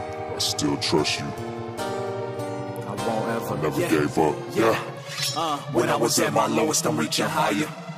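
Nothing here calls for comment, since no technical fault turns up anywhere in the clip.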